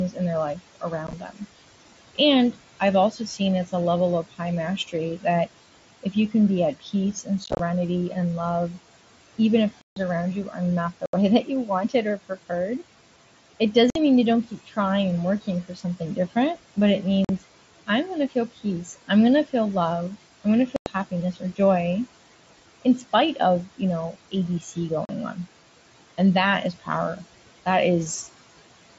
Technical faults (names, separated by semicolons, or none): noise suppressor artifacts; speech cut by the noise suppressor; unconcealed Bluetooth headset packet loss